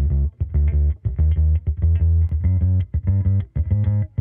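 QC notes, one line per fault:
2.29 s, repeated buffer: a very short block of about 1.45 ms plays twice, giving a single click rather than an audible stutter, which fits a 64-sample buffer. New audio arrived late, so the device replayed the last block. Essentially nothing is lost.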